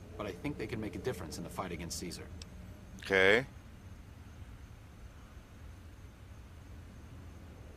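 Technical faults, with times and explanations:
No technical faults can be heard in this clip. Nothing in the audio calls for a time or an explanation.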